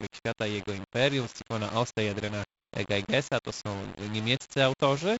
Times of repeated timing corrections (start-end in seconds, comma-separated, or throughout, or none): none